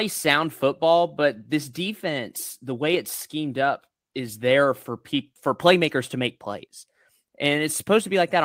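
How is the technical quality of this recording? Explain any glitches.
No glitches or technical problems can be heard here.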